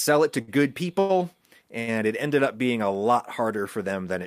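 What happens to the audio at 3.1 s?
Nothing goes wrong at 3.1 s; the speech carries on intact through that moment.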